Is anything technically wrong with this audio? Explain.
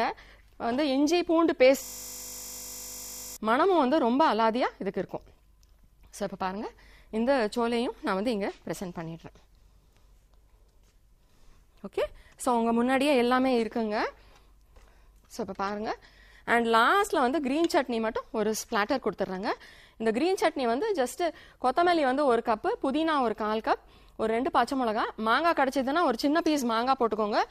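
Yes. From 1.83 to 3.37 s the audio turns into a steady buzz at 50 Hz, with no movement in it. This is a system hang loop. The computer or its audio driver stalled, but the sound hardware kept replaying the last stretch of its ring buffer. That 20 ms slice repeats 77 times back to back, and because the slice is so short, the repetition fuses into a tone at the loop rate.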